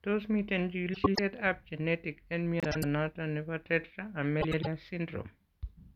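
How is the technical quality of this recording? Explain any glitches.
The recording has three short glitches, all from frames out of order, at 0.94 to 1.19 s, 2.60 to 2.84 s and 4.41 to 4.67 s. In each, two adjacent blocks of about 105 ms, consistent with runs of four frames, were decoded swapped. The result is a garbled flutter. Unlike a dropout or a stutter, nothing is lost or repeated, and the timing stays intact.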